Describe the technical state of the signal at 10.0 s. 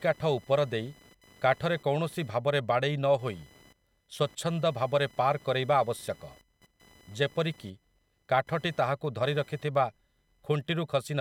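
At 10.0 s the speech carries computer activity noise, present throughout the clip: a buzzing chirp pulsing near 1 kHz, roughly 30 dB below the speech. Load swings in the computer disturb the shared audio ground. Unlike steady mains hum, it tracks machine activity, not the sound.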